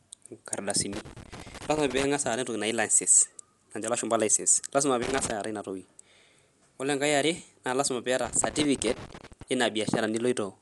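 A dull, band-limited sound runs through the whole speech clip, with nothing above about 11.5 kHz and a rough, fluttering grain clinging to the voiced sounds. This is plainly audible codec damage, likely from Dolby Digital compression at a low bitrate, fitting something near 64 kbps. Starved of bits, the encoder cuts off the top of the band and leaves many frequency lines without detail. The decoder then fills those lines with noise, which flutters around each tone.

From 0.93 to 2.04 s an irregular burst of crackle and scratching breaks into the sound. It returns briefly from 5.02 to 5.31 s and again from 8.25 to 9.43 s. This is loose connector crackle. A worn or dirty contact in the signal path is making and breaking as it shifts. That chops the audio into fragments, and any DC on the line turns each break into a pop, so the crackle comes in ragged clusters rather than a steady rhythm.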